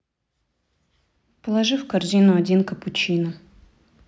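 A listener would find no technical fault in this speech recording: the signal holds steady throughout, with nothing that points to a problem anywhere in the capture or delivery chain.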